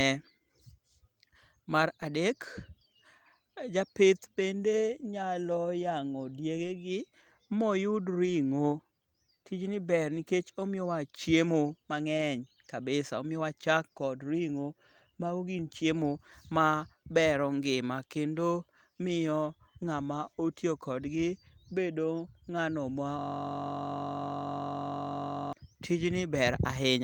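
Lost packet rebuilt from error correction affects this speech recording at 6.55–6.69 s, 8.25–8.31 s, 12.13–12.23 s and 26.15–26.21 s. Audio was dropped in transit, and the decoder played the low-bitrate backup copies carried in the following packets, so there is no gap but the patches sound briefly rougher and noisier. The system hang loop runs from 23.19 to 25.53 s. A frozen machine left the sound hardware replaying one 21.33 ms slice, which fits a 1024-sample buffer, about 110 times over, producing a steady 46.9 Hz buzz.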